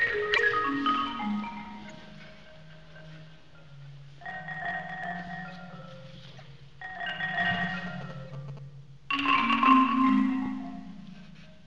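Right at 0.31 to 0.40 s there's a corrupt frame decoded: bit errors got into the compressed data and the decoder played the damaged stretch anyway, so energy lands at the wrong frequencies and you get a loud, brief glitch. It happens again at 1.88 to 1.91 s, 6.35 to 6.42 s and 8.24 to 8.31 s. Those later ones are much quieter glitches, the last barely there. Each burst's length suggests only a few bad frames.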